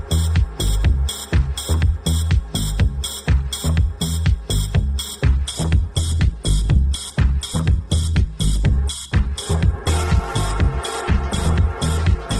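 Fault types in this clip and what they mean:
Adaptive stream at a lower bitrate: from 5.26 s to the end, the treble abruptly thins, with nothing above 12.2 kHz and smeared codec artefacts, but no gap. The stream switched down mid-play, consistent with Opus dropping from 64 to 12 kbit/s.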